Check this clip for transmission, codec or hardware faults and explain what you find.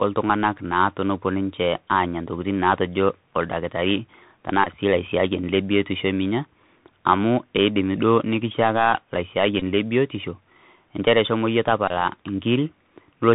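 Two faults are present: a narrowband Bluetooth headset codec across the whole speech clip, and three brief packet-repeat buzzes.

Bluetooth CVSD headset codec, throughout: a one-bit delta coder with adaptive step, consistent with a 64 kbps link, cuts everything above 4 kHz, roughens s sounds and leaves granular hiss.

Bluetooth headset packet repeated, at 4.64–4.69 s, 9.60–9.62 s and 11.88–11.92 s: lost packets are replaced by re-decoding the previous one, producing short buzzes near 267 Hz.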